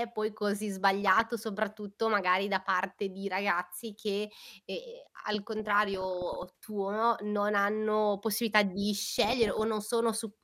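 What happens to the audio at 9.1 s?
At 9.08 s the speech breaks into DAB burbling, which lasts until about 9.64 s. Weak reception lets bit errors slip past the error correction and into the MP2 audio data. The error rate here points to something around one percent. Corrupted samples put short blips of noise in single sub-bands, and corrupted scale factors make sub-bands jump in level for up to a frame. The result is a burbling sound laid over the speech for about half a second.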